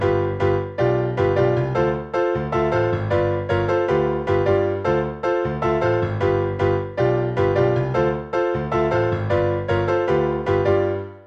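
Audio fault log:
No fault was found in the audio. Nothing in it calls for an entry in this log.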